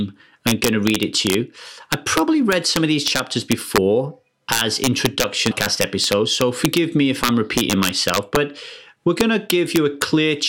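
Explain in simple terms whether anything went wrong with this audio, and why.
Yes, this speech has integer overflow throughout: the loudest peaks exceed the number limit and wrap to the opposite extreme, causing sharp cracks on a tiny fraction of moments.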